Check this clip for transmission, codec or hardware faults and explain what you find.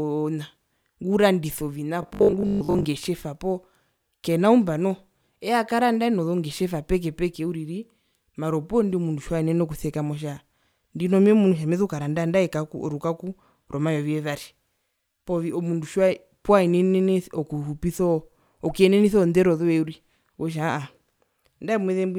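One fault stands out: robotic sound from repeated short buffers, from 2.03 to 2.85 s. The speech turns into a stiff, metallic buzz locked at 50 Hz, still loosely tracking the syllables. The likely cause is audio arriving too slowly, so the playback side kept looping the last short buffer to fill gaps, with about half the stretch replaced by repeats; a 50 Hz buzz fits a 20 ms buffer.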